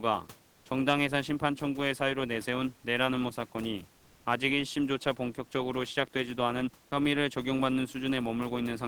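Speech in which the sending side likely cut transmission during two brief pauses, in the manner of Opus discontinuous transmission, leaving the receiver to generate comfort noise in place of the background. From 0.51 to 0.65 s (140 ms) and from 3.97 to 4.25 s (280 ms), the real room noise, about 31 dB under the speech, gives way to a smooth, detail-free hiss at the same level in the first gap and about 1 dB off in the second, before the genuine background returns.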